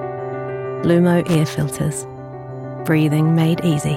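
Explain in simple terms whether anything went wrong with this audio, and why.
A short burst of loose connector crackle sits between 1.27 and 1.35 seconds, lasting under a tenth of a second. A worn or dirty contact in a cable or plug briefly lost and regained its connection as it shifted, chopping the sound on and off several times in quick succession. What sets it apart from a single digital click is that it is a ragged, irregular scratching cluster rather than one clean tick.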